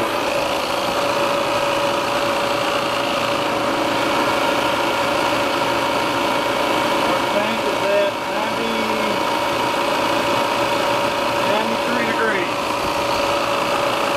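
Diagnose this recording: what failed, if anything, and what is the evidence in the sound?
Nothing in the recording points to a failure at any stage of the chain.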